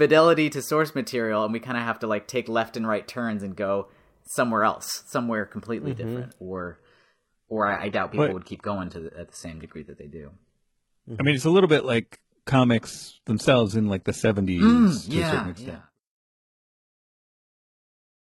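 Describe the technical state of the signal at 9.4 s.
At 9.4 s the speech carries more codec artefacts. This is an adaptive stream at a lower bitrate. From 6.39 s to the end, playback switched suddenly and without a gap to a low-bitrate version as the connection slowed, which fits HE-AAC near 16 kbit/s.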